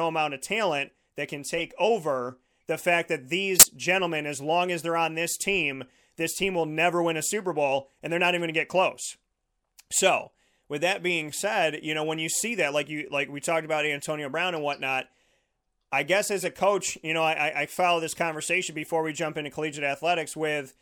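A corrupt frame decoded shows up three times in this speech. First at 1.51 to 1.62 s, after "of talent that can"; then at 3.55 to 3.66 s, after "over the fact that"; and at 16.40 to 16.48 s, after "I guess". Each time a few compressed frames arrived with flipped bits and got played anyway, so misread gains and codes put energy at the wrong frequencies, giving a brief chirp, squeak, blip or noise burst. The second one is loudest, peaking near -5 dBFS.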